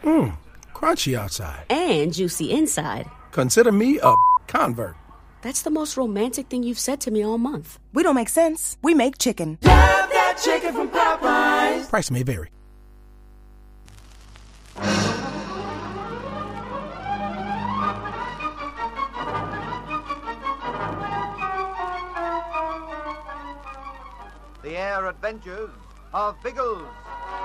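Mains hum runs throughout the clip as a steady low tone at 50 Hz, sitting roughly 30 dB below the signal. Power-line current has leaked into the audio path, most plausibly through a ground loop or a nearby transformer, leaving a constant drone under the sound.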